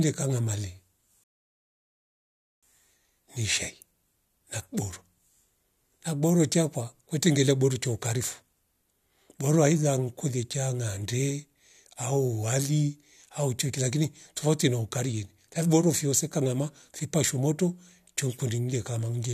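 At about 1.24 s the speech just drops out into silence and stays gone until about 2.63 s. That's a rebuffering stall: the player used up everything it had downloaded and had to wait for more data before carrying on. When it comes back, the speech picks up exactly where it left off, so nothing's missing. You just get roughly 1.4 s of dead air added to the playback.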